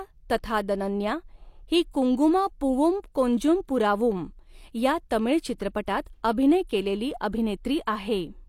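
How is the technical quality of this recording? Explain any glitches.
There is one glitch, a pre-echo at 5.86 s, just after "कोंजुम पुरावुम या तमिळ" and before "अभिनय केलेली". The codec's transform block spread its quantisation noise across the whole block. That noise was sized for a sharp attack landing late in the block, so it also filled the quiet instant ahead of the attack. The result is a short hiss of about 15 ms just before the onset, and the attack itself sounds softened and smeared.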